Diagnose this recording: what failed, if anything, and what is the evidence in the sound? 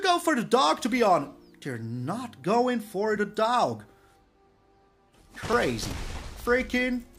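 Driver stage: skips forward at 3.17 s and 5.53 s, the second around 30 ms. Likely a dropped buffer (overrun), with samples overwritten before being read.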